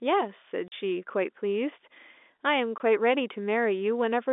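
At 0.68 s the speech drops out for 40 ms, and again at 2.78 s for 20 ms. That's packet loss filled with silence: packets never arrived and the receiver played dead air in their place. The cut in and out is hard-edged at both gaps. The lengths suggest 20 ms packets, so one lost at the second gap and two in a row at the first. It all sits inside the narrow telephone band of the G.711 line, roughly 250 Hz to 3.6 kHz.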